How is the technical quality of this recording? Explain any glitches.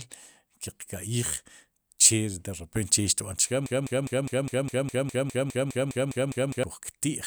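The recording is marred by one serious glitch. From 3.66 to 6.64 s there is a broken-record loop: playback or the stream most likely stalled and kept resending the last fragment it still held. A slice of speech about 204 ms long repeats exactly, back to back, 15 times, giving a rapid mechanical stutter for roughly three seconds. Whatever speech belonged in that stretch never arrives, so that part of the recording is simply lost.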